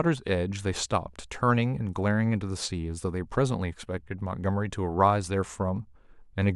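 From 2.81 s to 5.71 s the speech carries sample clock jitter: the converter's timing wanders by a fraction of a microsecond, so each sample lands slightly early or late. Where the waveform changes fastest, that timing slip becomes an amplitude error, roughly 55 dB below the signal, heard as a faint gritty hiss riding on louder, brighter syllables and gone in pauses. A spectrogram shows a diffuse high-frequency haze tracking those syllables, while the waveform looks essentially unchanged.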